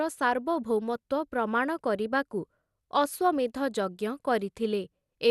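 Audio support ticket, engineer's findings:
Speech dull and band-limited throughout, nothing above about 12.2 kHz. Gurgling, granular distortion, plainly audible. Likely MP2 compression. Bit allocation too thin for the 32 sub-bands: top bands dropped entirely, remaining bands coarsely quantised and flickering in and out. Damage level fits a rate around 80 kbps.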